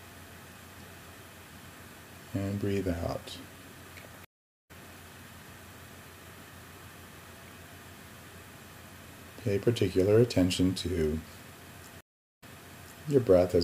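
At 4.25 s the audio drops out for 444 ms and picks up again at 4.71 s roughly 0.4 s further along, skipping material. At 12.01 s another 413 ms gap ends by jumping 0.63 s backwards, so a stretch repeats until 13.05 s. Both are stream reconnects: the connection broke and the player restarted a fresh decoder mid-stream, the second time after the server resent a burst of earlier audio.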